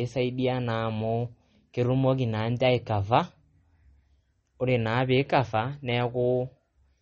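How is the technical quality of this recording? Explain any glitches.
The quality is poor, with plainly audible compression damage across the whole speech clip. Throughout, nothing reaches above 8.3 kHz, and a watery, swirly texture points to likely MP3 compression at a low bitrate, around 32 kbps. A simple low-pass filter would dull the sound without that flickering.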